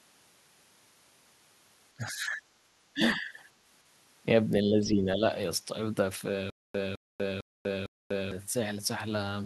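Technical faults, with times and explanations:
1.95–2.45 s, 2.93–3.34 s and 4.64–5.22 s: speech suppressed in double talk. In each span the speech sinks by as much as about 15 dB in the first two and about 10 dB in the third, then recovers. The likely cause is an echo canceller that heard both sides at once and turned its own talker down along with the echo. Unlike a network dropout, the sound thins and ducks rather than cutting to clean silence.
6.50–8.32 s: stutter with silent gaps. A 0.21 s fragment plays, then about 0.24 s of dead digital silence follows, and the cycle repeats every 0.45 s, four times in all. This is likely a player or stream stalling, replaying its last buffer at each retry and then running empty. What separates it from an echo or packet-loss concealment is that each burst is an identical copy on an even clock, with true silence between and no new audio.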